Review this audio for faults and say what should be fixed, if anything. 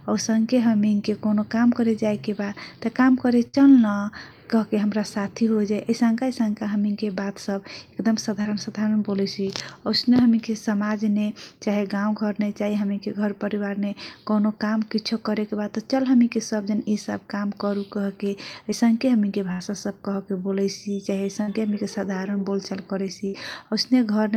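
Bursts of packet loss occur at 3.47–3.55 s, 19.52–19.62 s, 21.42–21.49 s and 23.27–23.35 s. Each time, the receiver stretches the last sound for about 56 to 77 ms and fades it out. The speech then jumps ahead, with 60 to 80 ms missing.

Short concealed packet loss appears at 8.41–8.47 s and 18.71–18.74 s. Here 40 ms and then 20 ms of audio arrive too late. The decoder patches 35 ms and 10 ms from the preceding sound, then blends back. Each is heard as a brief smear.

To prevent both, add forward error correction on the network path, or give the jitter buffer more headroom.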